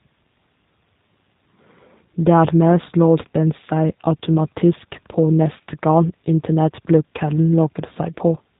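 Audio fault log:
Throughout, G.729 codec: speech sounds rough and slightly synthetic with nothing above 4 kHz, which fits an 8 kbit/s coder rebuilding the voice from a filter and a few pulses.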